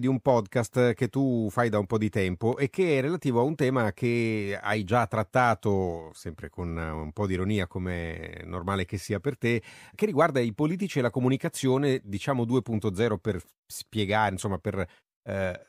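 From 2.24 to 2.53 s, between "da un po' di" and "e che è relativo", the speech carries CD scratch ticks. A scratch corrupted more data than error correction could rebuild, once per disc revolution. The three ticks, the longest about a millisecond, show as thin vertical spikes in the waveform and narrow broadband lines on a spectrogram.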